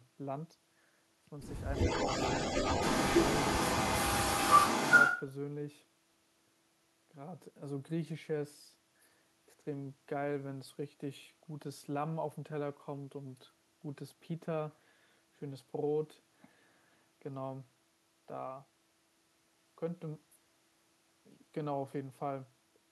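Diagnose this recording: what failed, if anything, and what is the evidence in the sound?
The fault sits in call processing: an echo leak from 1.73 to 5.22 s, where a distinct, prominent copy of the speech returns about 345 ms behind the original. The likely cause is a far-end loudspeaker whose echo canceller failed to subtract what its microphone picked up, sending it back down the line. A room reflection would smear into a diffuse tail; this is a discrete, fixed-delay repeat confined to one stretch.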